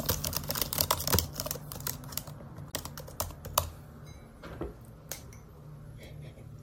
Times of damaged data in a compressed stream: 2.70-2.74

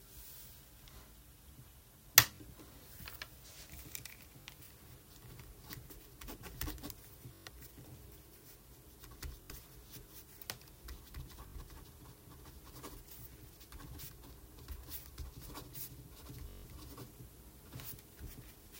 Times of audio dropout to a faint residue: none

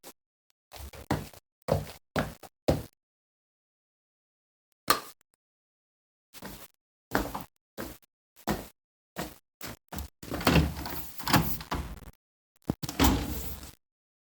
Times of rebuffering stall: 12.15-12.56

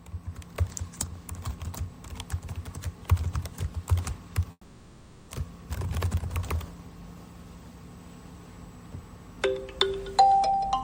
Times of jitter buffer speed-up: 10.49-10.73

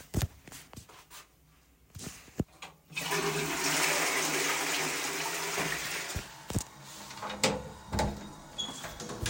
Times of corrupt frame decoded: 0.77-0.80

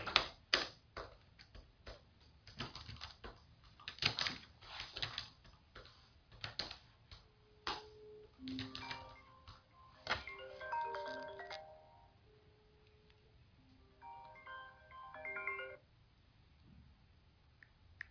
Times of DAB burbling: none

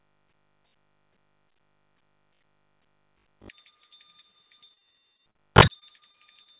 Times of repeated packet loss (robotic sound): 4.64-6.47

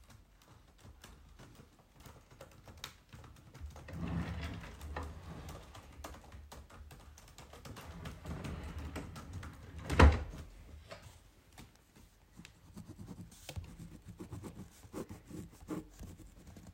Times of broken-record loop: none

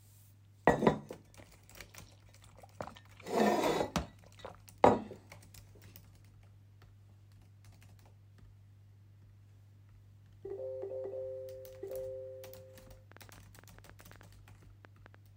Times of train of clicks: 13.12-15.15

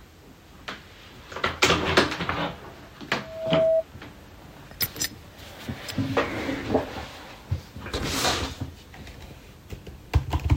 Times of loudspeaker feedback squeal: 3.15-3.84

